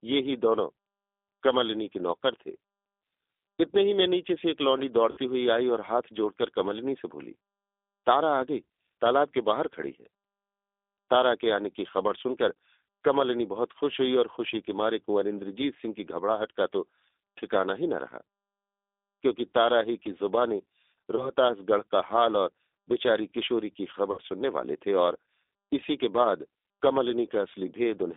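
Across the whole clip the speech carries the sound of the G.729 codec, and the roughness is plainly audible. The band stops at about 3.6 kHz and thins below 300 Hz, and voiced sounds have a faintly synthetic, rough texture. That texture comes from rebuilding each 10 ms frame from a vocal tract filter, a pitch predictor and a few pulses, which fits a low rate of about 8 kbit/s. A simple band-limited phone line would sound dull but not grainy in this way.

At 5.1 s, 21.16 s and 24.12 s there is VoIP packet loss concealed by the speech codec. At 5.1 s and 24.12 s about 60 ms of audio is missing, which fits three lost 20 ms packets. At 21.16 s about 20 ms is missing. In place of the missing audio, the decoder stretches its last pitch and filter into a buzzy tone or a coloured noise that fades. The voice stays weak and distorted for a short while after audio returns, because each frame builds on the one before. 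A plain dropout would be silence or a click, with an abrupt, clean recovery.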